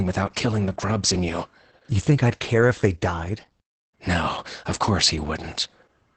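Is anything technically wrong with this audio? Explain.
Yes. Opus voice compression affects the speech throughout. Almost nothing survives above 8.5 kHz, which fits wideband SILK coding of the linear-prediction kind. The heavy damage points to a bitrate around 10 kbps, where the excitation is coded coarsely. The voice sounds muffled, hoarse and slightly robotic. On a spectrogram the energy stops sharply at 8.5 kHz, and the harmonics look smeared and patchy.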